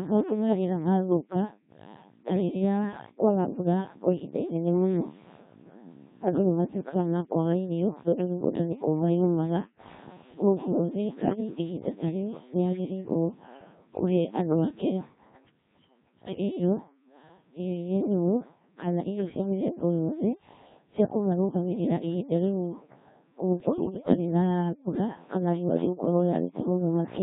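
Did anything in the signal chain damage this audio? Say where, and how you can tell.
Yes. The damage is at the codec stage, throughout the clip. The speech is Codec 2 vocoder output. It sounds robotic and buzzy from start to finish. The coding damage is heavy, and the thinness fits a 1.3 kbit/s mode. The decoder does not keep the original waveform. It rebuilds the speech from sine waves, using only pitch, voicing, level and a coarse spectral shape. That explains the synthetic, hollow quality.

The second fault is in the radio channel: bit errors on digital voice radio. The first burst runs from 11.24 to 11.40 s, just before "ihinda ta rĩu nĩ". The second is longer, from 23.60 to 24.17 s. In both, the speech turns into warbles and bleeps, with sudden jumps in pitch, level and tone. Corrupted bits, at an error rate of several percent, are changing the decoded parameters of whole frames at a time.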